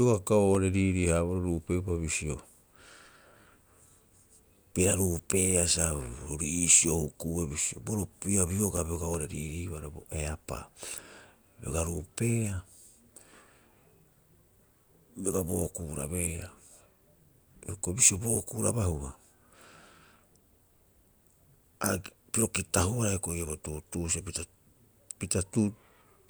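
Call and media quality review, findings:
Regular ticks, eight in a row, 0.36 to 1.66 s, longest about 1.5 ms. Evenly spaced, about six a second. CD scratch ticks: disc blemish exceeds error correction once per revolution; player interpolates or mutes the lost samples.

Same pattern, 8.40 to 9.70 s, after "huku'ue bisio bo ro", before "bo eapaa". Eight ticks, about six a second, longest about 3 ms. Disc blemish beyond error correction, recurring on each turn.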